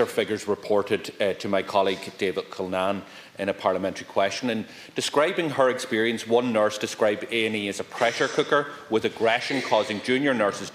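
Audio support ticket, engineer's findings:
No audible faults found on review.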